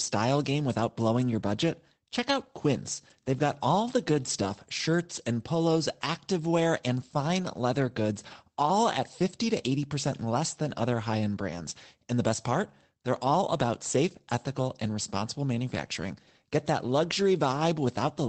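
Speech carried over a call link, with its spectrum ending sharply at 8 kHz from the codec's bandwidth limit, shows lost packets rebuilt from error correction. Between "got all the" and "shirts and polos activewear", from 4.17 to 4.55 s, about 200 ms was rebuilt from low-bitrate redundant copies, which fits a run of roughly ten lost packets. A single packet's worth at 11.57 to 11.59 s, just after "than other high end", was rebuilt the same way. There is no gap, but these stretches sound rougher and noisier. On a spectrogram they look smeared, with added broadband noise. The waveform stays continuous.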